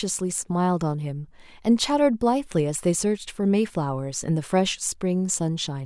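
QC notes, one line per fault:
No faults found in this speech clip. Nothing in the audio needs a QC note.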